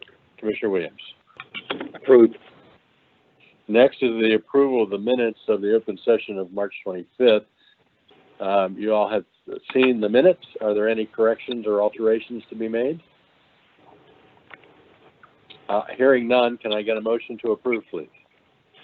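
No technical faults occur anywhere in the recording, so there is nothing to describe in time order.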